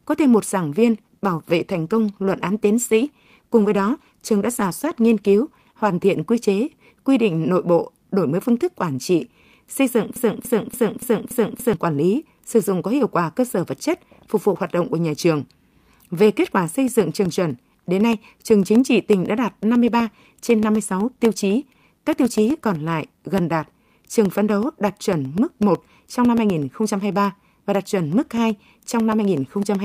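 From 0.87 to 7.45 s, just after "có thêm một giảng", a call bitrate drop sets in. The call's bandwidth estimate falls and the encoder codes the speech far more coarsely, with a sound that fits a fall from about 64 kbps to about 20 kbps. For roughly 4.8 s at its worst the speech turns rough, watery and muffled as the high frequencies go. Clean speech returns by "nội bộ đổi mới".

From 10.16 to 11.74 s, after "quản trị xây dựng", a broken-record loop follows. The stream likely stalled and kept resending the last fragment it held. A 0.29 s piece repeats back to back five times, and the speech that belonged there is lost before "quản lý sử dụng" resumes.

From 16.75 s, after "kết quả", to the end of the clip, periodic USB or driver dropouts recur every 0.125 s. A task blocking the bus or driver drops brief slices of audio and leaves silence in their place. The result is a steady ticking, eight per second, that sounds only while speech is present.

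From 19.74 to 24.29 s, a second call bitrate drop overlaps the ticking. It sounds consistent with about 64 kbps falling to about 26 kbps, with roughly 3 s at the lowest, and the speech again becomes coarse and dull.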